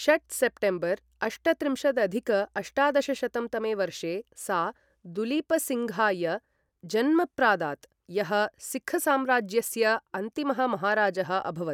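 No technical faults can be heard anywhere in the recording. Nothing in the audio points to a problem in how it was captured, processed or delivered.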